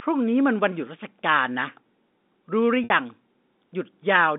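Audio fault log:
2.84–2.90 s, packet loss with pitch repetition: about 60 ms of the stream goes missing, which fits three 20 ms packets. The receiver fills the hole by looping the last pitch period, so the gap sounds like a briefly held, buzzy tone that tapers away before the speech returns through a short cross-fade. It sits within the narrow 200 Hz–3.7 kHz telephone band, like the rest of the G.711 line. A plain dropout would leave hard silence, and a stutter would replay whole syllables rather than one droning cycle.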